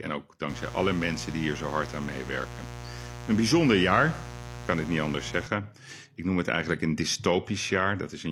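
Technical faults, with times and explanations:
0.49 to 5.47 s, mains buzz: a steady, raspy buzz sits under the speech, fairly loud at roughly 10 dB below it. Sharp switching spikes, twice per 60 Hz cycle, from a dimmer, rectifier or missing shield, spread harmonics of 60 Hz into the kilohertz range.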